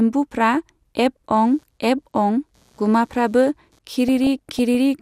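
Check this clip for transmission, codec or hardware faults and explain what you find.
Two faults are present in this speech clip.

From 1.34 to 3.79 s there is computer activity noise. Load changes in the host computer shift the ground shared with the audio circuit, which injects a buzz pulsing at roughly 150 Hz, well down at around 40 dB below the speech. It follows the machine's activity, not the talker.

From 4.08 to 4.78 s there is DAB burbling. Weak reception let a small fraction of corrupted bits slip past error correction into the MP2 data, so wrong samples put short bursts of noise into single sub-bands. The speech gets short noisy blips in single sub-bands.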